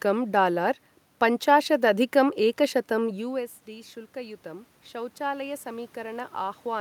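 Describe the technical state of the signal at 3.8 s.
At 3.8 s the signal is inside a stretch of automatic gain rising that runs from 3.02 s to the end of the clip. Around 3.0 s the talker moves away and the level at the microphone falls by about 15 dB. The gain control responds by raising its gain gradually rather than at once, so the voice climbs back slowly, and the room noise swells by the same amount as the voice.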